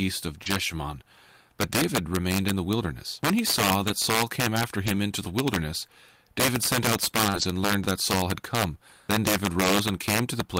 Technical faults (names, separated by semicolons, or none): integer overflow; short concealed packet loss; lost packet rebuilt from error correction